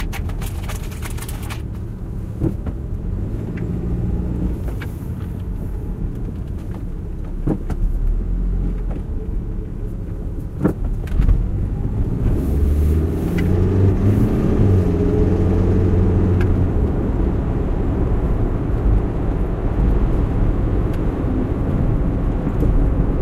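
No technical faults are audible.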